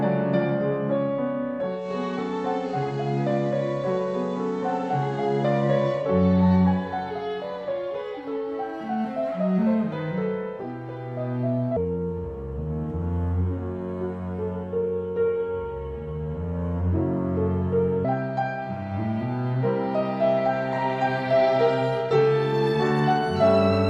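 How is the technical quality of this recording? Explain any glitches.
Two glitches mar the recording. From 1.74 to 6.10 s, digital radio blending to analogue: the receiver cross-faded over 153 ms to FM, adding hiss about 35 dB down. From 11.77 to 18.05 s, a section at the wrong speed plays at 0.696× and about seven semitones low, slow and deep, likely from a clock mismatch.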